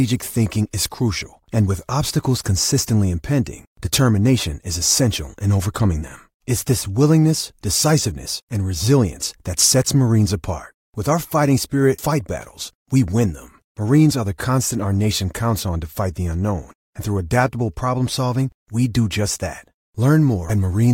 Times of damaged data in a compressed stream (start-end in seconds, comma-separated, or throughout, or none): 11.98, 20.49